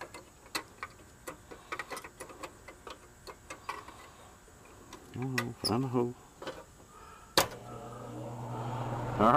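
No technical faults are audible.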